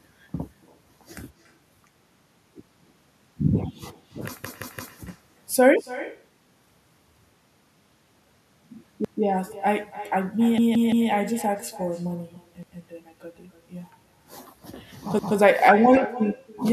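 Throughout the speech, echo with no canceller: a far-end loudspeaker feeds back into the microphone, returning a thinner copy about a third of a second late, about 16 dB down.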